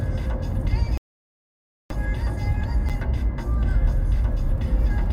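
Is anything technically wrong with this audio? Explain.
Yes, there are two faults.

At 0.98 s a digital broadcast dropout begins. The receiver stopped getting usable frames and muted until 1.91 s, which fits roughly 29 lost frames. About 0.93 s of sound is missing. The waveform shows a flat silent stretch, and the spectrogram shows a blank vertical band.

At 2.89 s there is a block of digital silence. An 8.7 ms run of samples dropped straight to zero, most likely because the output buffer was not filled in time. The hard edges make a sharp tick. The waveform shows a thin flat notch, and the spectrogram shows a brief broadband click line at each edge.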